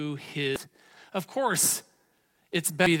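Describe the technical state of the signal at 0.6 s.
Damaged data in the compressed stream sits at 0.56 s, just before the moment asked about. Part of the encoded speech is corrupt there, so the decoder misreads the affected frame, loses its place in the bitstream and has to hunt for the next valid frame header before resuming. The result is a very brief chirp or blip lasting only a few milliseconds, cutting across the speech rather than belonging to it.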